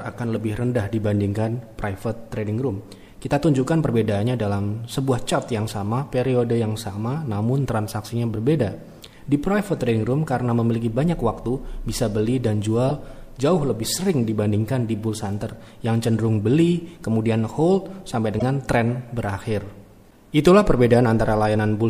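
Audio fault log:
12.86–12.91 s and 18.39–18.42 s: corrupt frame decoded. Damaged compressed frames were played anyway, giving brief chirps or noise bursts peaking around -10 dBFS; the spectrogram shows misplaced energy blocks spanning roughly one or two frame lengths.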